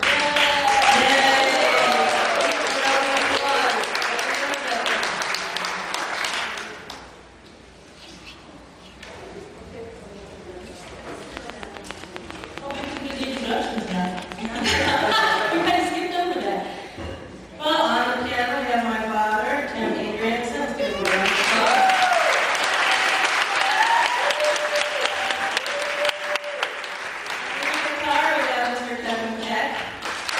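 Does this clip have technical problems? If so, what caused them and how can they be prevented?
Yes. From 11.37 to 15.66 s a steady ticking runs over the sound, a train of clicks at about 7.5 per second, around thirty in all and roughly 15 dB above it. Likely cause: interference or a faltering interface. Shielding cables and securing connections prevents it.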